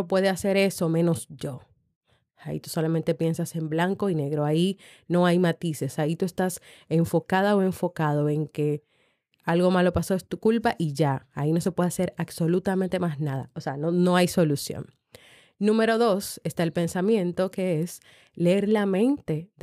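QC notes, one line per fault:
No faults heard anywhere in the clip; nothing to log.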